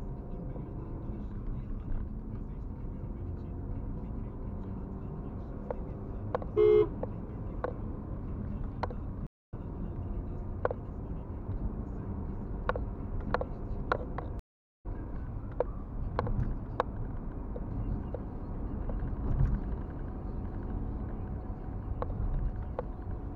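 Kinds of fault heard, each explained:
Stream reconnect: The sound drops to silence twice, for about 0.25 s at 9.27 s and about 0.45 s at 14.39 s. Each time it resumes a little further along, roughly 0.3 s later the first time and around 0.4 s later the second, so a short stretch is skipped. The connection broke, playback stalled, and after reconnecting a fresh decoder picked up the stream at its current point.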